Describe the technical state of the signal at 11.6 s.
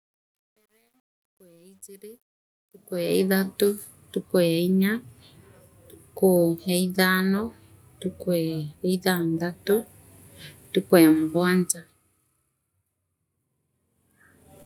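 At 11.6 s the signal is intact, with no audible fault.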